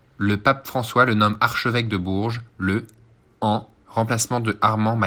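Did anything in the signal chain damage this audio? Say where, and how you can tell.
Yes. At 1.35 s, between "le nomme" and "archevêque de", there is a jump in the speech, losing only a few milliseconds. This is likely a dropped buffer (overrun) at the driver/buffer stage, where unread samples were overwritten and the remaining audio spliced together without a gap, under light Opus coding.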